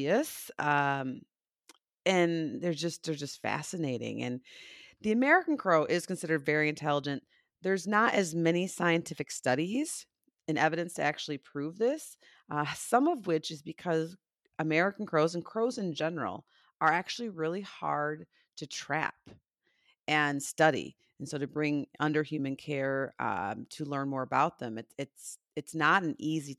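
No audible faults turn up anywhere in the recording, from the first syllable to the last.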